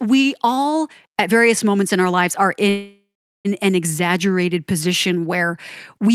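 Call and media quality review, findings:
Call audio freeze, 2.69–3.47 s, right after "in our lives are": sound stalls into a fading buzz, then about 0.41 s of silence before resuming where it stopped, nothing lost. Likely jitter buffer underrun from delayed packets; 0.75 s gap inserted, delay now 0.75 s longer.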